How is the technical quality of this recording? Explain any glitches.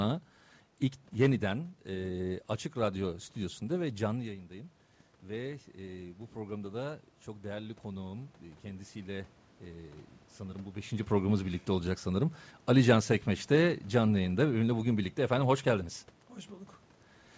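The main glitch is an automatic gain rise in the middle of the speech. The recording also carries room noise and passed through a call path, but neither is a fault.

From 4.21 s to 10.04 s, between "stüdyosunda ve canlı" and "sanırım bu beşinci programımız", the automatic gain control reacted to the input falling by about 11 dB, when the talker moved away from the microphone around 4 s. It raised its gain gradually, by about 7 dB over nearly six seconds. You hear the voice and the room noise swell together, so the background becomes more noticeable as the level recovers. The talker moves again at about 10.5 s.

The high end stops at 8 kHz, which fits the G.722 call codec at 64 kbps. The room noise belongs to the recording itself.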